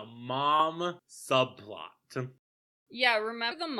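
A brief smeared blip at 0.59 s marks where the speech lurches forward by about 40 ms, and a larger jump from 3.51 to 3.54 s drops roughly 150 ms of sound under a similar soft, blurred join. These are compressed frames skipped: the decoder never played whole frames, which were either missing from the file or rejected as damaged. The jump sizes fit a 20 ms frame, around two frames lost first and about seven later. Because neighbouring frames overlap, each join smears rather than clicks.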